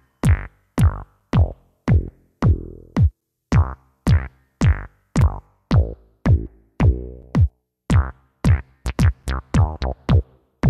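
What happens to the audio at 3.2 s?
At 3.21 s there is a gap between chunks. The audio appears to have been delivered in blocks of about 2 s, and at this join there is roughly 7 ms of silence before playback resumes. Nothing is missing from the material on either side; the sound simply stops and restarts. It comes across as a brief hole, a tiny dropout that interrupts the flow for an instant.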